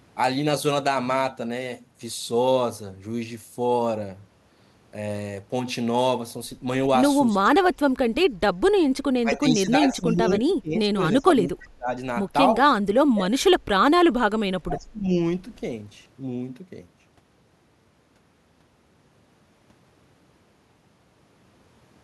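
Speech suppressed in double talk pulls the speech down by about 15 to 30 dB at 7.32–8.37, 9.19–10.26, 10.43–11.0, 11.21–11.89, 12.57–13.37 and 14.28–15.1 s. An echo canceller likely treated overlapping talk as echo. Unlike packet-loss dropouts, the speech is pulled down by the canceller rather than lost in transmission.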